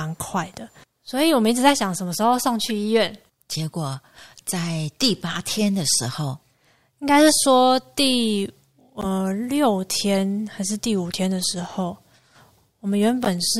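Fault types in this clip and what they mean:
Corrupt frame decoded: a couple of compressed frames at a time arrive with flipped bits, and the decoder plays them anyway, so energy lands at wrong frequencies for a few tens of milliseconds. You'll hear short chirpy blips over the speech at 2.66–2.69 s, 9.01–9.06 s, 10.15 s, 11.39–11.44 s and 13.24–13.28 s. The first one is faint, the middle ones are stronger, and the last one is the loudest, peaking around -5 dBFS.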